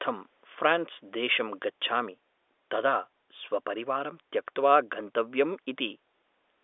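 Nothing goes wrong anywhere in this speech; it just carries the familiar narrow sound of a G.711 telephone line, with nothing reaching above about 3.8 kHz.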